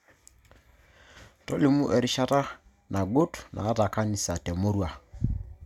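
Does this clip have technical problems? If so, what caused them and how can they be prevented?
No, there are no technical problems to report in this speech clip. With nothing to trace back to a cause, there is nothing here that needs preventing.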